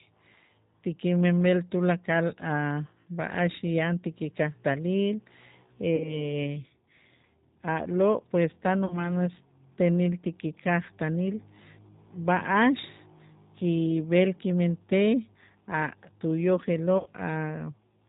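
Throughout, the speech carries the G.729 codec at 8 kbit/s, with plainly audible damage. Everything above 4 kHz is gone. Unlike a plain band-limited line, the voice also has a rough, slightly synthetic grain, because it is rebuilt from a vocal tract filter and a few pulses per frame.

VoIP packet loss concealed by the speech codec occurs three times: from 5.96 to 6.26 s and from 8.86 to 9.10 s, each after about 40 ms of lost audio, and from 16.98 to 17.10 s after 80 ms. The decoder extends its last pitch and filter with falling gain. What distinguishes this from a dropout is that there is no silent gap. The sound instead smears into a fading buzzy tone or coloured noise and stays weak briefly after packets resume.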